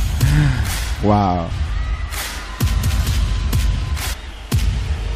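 A brief blip cuts across the audio at 4.12 s and is gone almost as soon as it starts. It is the mark of damaged data in a compressed stream. A short stretch of the encoded bytes arrived wrong, lost, zeroed or overwritten, so the decoder could not rebuild those frames properly. It fell out of step with the frame structure, and had to find the next valid frame header before clean decoding resumed.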